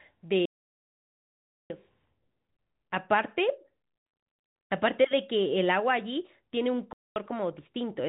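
From 0.46 s to 1.7 s the speech cuts to dead silence for about 1.24 s. This is an audio dropout to silence. No room tone remains in the gap. The input was likely lost while the recorder kept writing silence, so that stretch is gone.

From 6.93 s to 7.16 s, 230 ms of the telephone-band G.711 signal vanishes. This is packet loss filled with silence. The receiver played nothing where packets were missing, which fits 10 ms packets. The hole has hard edges.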